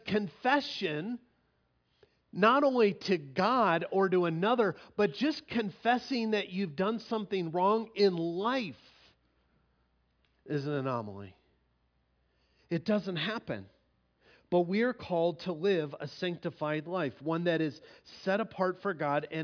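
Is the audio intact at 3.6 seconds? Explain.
Yes, at 3.6 seconds the audio runs intact, with no dropout, click, distortion or other fault audible at that moment.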